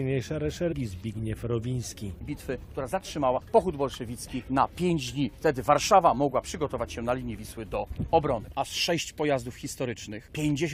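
At 0.71 s and again at 3.36 s, compressed frames are skipped: the decoder drops whole frames, about a tenth of a second the first time and roughly two frames' worth later, at 21.3 ms each. The sound jumps forward at each join.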